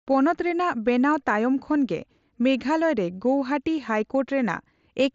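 Nothing stood out on listening to this speech, which comes through a Bluetooth mSBC headset link.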